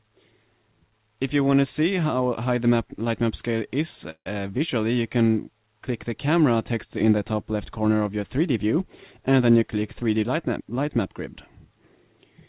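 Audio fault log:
4.10–4.27 s, long network dropout: a stretch of about 160 ms of audio most likely never arrived, so the receiver had nothing real to play. It extended the last sound for roughly 150 ms as a fading buzz or hiss, and around 70 ms of plain silence can be heard before the audio resumes further on, with the missing part simply gone.
9.99–10.03 s, short concealed packet loss: about 20 ms of audio reached the decoder too late to use. The receiver covered roughly 13 ms of that gap by continuing the preceding sound and then blended back into the real signal. The result is a brief smear or wobble lasting a few hundredths of a second, heard against the 4 kHz band limit of G.711 A-law coding, which fits a 64 kbps call stream.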